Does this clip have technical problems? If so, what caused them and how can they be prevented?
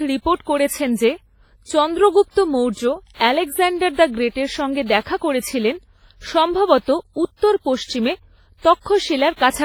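Yes. Throughout the speech there is heavy ringing and washy smearing, with hiss that swells and fades with the signal, likely from WMA compression at a low bitrate near 24 kbps. A spectrogram would show blocky, smeared patches, blank holes where weak detail was discarded, and nothing above 21.4 kHz. Encoding at a higher bitrate or with a more modern codec would prevent it.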